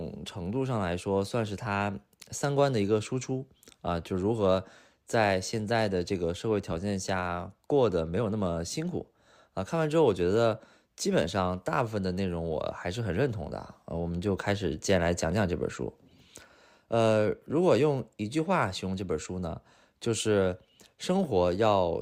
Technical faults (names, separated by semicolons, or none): none